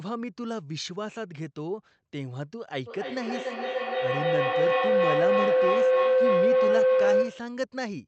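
A speech recording carries a feedback howl from 2.86 s to 7.67 s. Two devices in the same room share the call. Each trip from microphone to loudspeaker and back adds level. The repeats grow rather than fade. They narrow to a tone near 500 Hz. The howl pulses at roughly a third of a second, the loop's delay. At its peak it sits about 10 dB above the speech. The call path's top end stops near 8 kHz.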